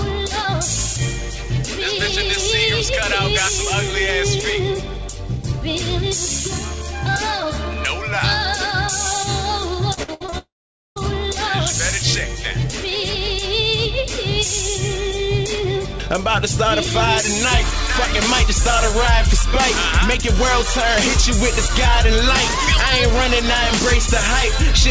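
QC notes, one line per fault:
9.94–10.34 s, repeated packet loss (robotic sound): five short holes, the longest 64 ms, are each patched by stretching the preceding sound, so about 45% of this span is synthetic fill and roughly 160 ms is gone. The result is choppy. A spectrogram shows repeated frozen, smeared harmonic blocks broken by abrupt vertical seams.
10.38–10.98 s, long network dropout: this is likely a network dropout. About 580 ms never arrives. The last sound is continued as a buzzy tail that fades, then roughly 470 ms of silence follows before the audio resumes with that section missing. The waveform shows a decaying smear, then a flat line.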